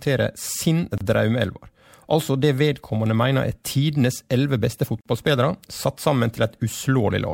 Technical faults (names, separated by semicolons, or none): gap at a join of encoded pieces